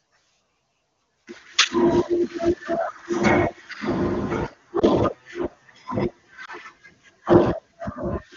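A speech recording carried over AMR wideband, where the band-limited HD Voice character sounds like one of the higher rates. It has two brief lost AMR speech frames, at 4.79–4.84 s and 6.45–6.50 s. Each is a single 20 ms frame that failed its check after radio errors, so the decoder filled the gap by repeating the previous pitch and vocal tract settings at lower gain. You hear a short dip or warble, then the voice comes back weak for an instant.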